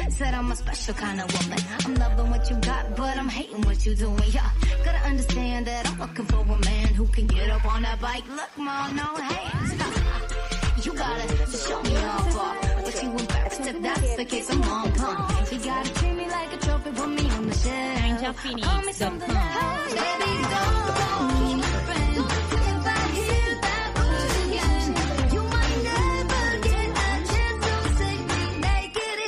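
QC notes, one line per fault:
No faults were heard anywhere in the clip. Nothing in the audio calls for a QC entry.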